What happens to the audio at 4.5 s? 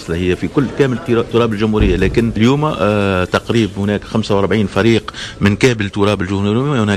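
Nothing goes wrong at 4.5 s; the audio plays through that moment cleanly, with no dropout, click or other fault.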